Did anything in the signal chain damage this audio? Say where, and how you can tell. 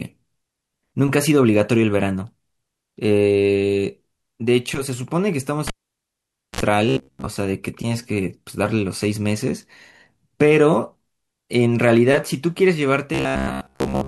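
Yes. A cable pulled and plugged in breaks the analogue wiring from 5.67 to 6.61 s. A pop opens the gap, then the signal drops to near silence for about 0.88 s as the live connection goes open. Just before contact is restored, a 49 ms burst of 60 Hz mains buzz appears while only the plug tip touches, picking up hum without a proper ground. A second pop follows as the speech returns.

Robotic sound from repeated short buffers appears from 6.89 to 7.27 s and again from 13.14 s to the end of the clip. The voice turns into a rigid, metallic buzz pitched at 66.8 Hz, still loosely following the speech contour. The likely cause is the driver or buffer stage delivering audio too seldom, so the software loops the last stretch of about 15 ms over and over. Most of the real audio in those spans is skipped.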